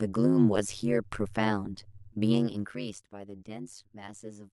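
Overlap-add ripple runs through the whole clip: the speech was cut into windowed frames and rejoined with an overlap whose gains fail to sum to a constant, so the level swings once per frame, around a hundred times a second. The swing is deep, about 60 dB between peak and trough, which turns the speech into a harsh, metallic buzz rather than a gentle tremolo.

From 2.25 s to 3.02 s, zipper noise appears as the level drops by roughly 15 dB. The change is applied in unsmoothed steps, around forty per second, instead of as a continuous fade, and each jump leaves a small click. Together they form a rapid ticking, zipping texture riding on top of the speech for as long as the drop lasts.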